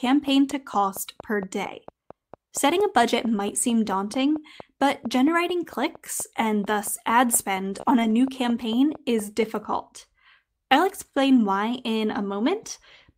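At 3.27 to 3.41 s, 4.21 to 4.23 s and 7.61 to 7.79 s, speech packets were lost and the decoder played low-bitrate copies carried in the following packets. This is a lost packet rebuilt from error correction, and the rebuilt stretches sound rougher and noisier, with no gap. Just after, at 7.81 to 7.85 s and 7.85 to 8.01 s, packets arrived too late. In this short concealed packet loss the receiver extended the preceding sound, adding roughly 15 ms, which is heard as a brief smear or wobble. From 7.88 to 8.12 s, error-correction copies again replace lost packets, leaving that passage coarse and noisy.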